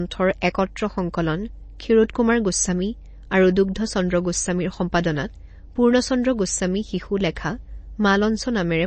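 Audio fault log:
Throughout: MP3 compression. The speech has nothing above 8.3 kHz, and a watery, swirling texture is plainly audible. This likely comes from a low-bitrate MP3 encode, which fits about 32 kbps. Short of bits, the encoder cut the treble and dropped weak frequency lines frame by frame.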